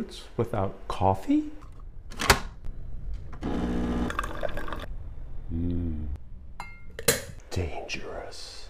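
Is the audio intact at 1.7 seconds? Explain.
Yes, at 1.7 seconds the audio plays through cleanly with no dropout, click, distortion or other fault.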